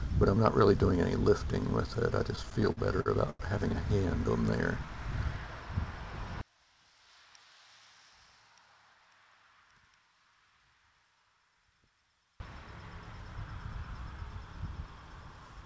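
The audio passed through a WebRTC call path whose coding leaves nothing above 8 kHz, consistent with G.722 at 64 kbps. Between 2.36 and 3.42 s, packets arrived late and the jitter buffer repeatedly ran dry. The receiver stretched the preceding sound across 10 short gaps, the longest 94 ms, so about a quarter of that stretch is concealed fill. This produces repeated stalls (stutter): the sound drags and hiccups, though nothing is actually lost. From 6.41 to 12.40 s, the level drops by about 27 dB and the sound turns faint. The likely cause is one channel inverted in polarity, so the shared content cancels when the channels are folded to mono, leaving only their difference.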